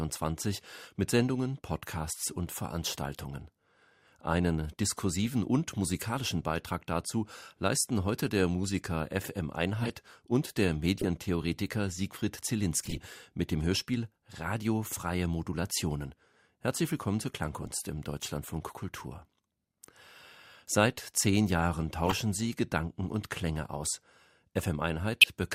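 Seven stretches of corrupt frames decoded in this speech: 7.31–7.34, 9.82–9.92 just before "und der", 10.97–11.06 right after "und der", 12.83–12.98 before "mit dem", 17.61–17.68, 22.06–22.15 and 25.21–25.30 s. Flipped bits got played anyway, throwing energy to the wrong frequencies. Each one lasts a frame or a handful of frames and comes through as a chirp or noise burst, from faint at 7.31 to fairly loud at the end.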